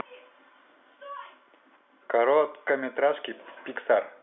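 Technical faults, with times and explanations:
Nothing stood out on listening; the speech comes through with the narrow, telephone-band sound of ordinary G.711 line coding.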